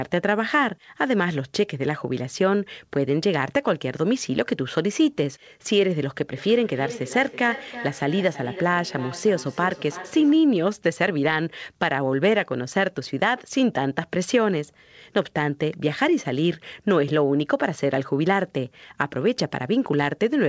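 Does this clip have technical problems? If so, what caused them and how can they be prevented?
Yes. From 6.37 to 10.54 s there is feedback echo between two devices. The sound returns about every 300 ms, at about 14 dB below the speech. Keep only one device's speaker and microphone active per room.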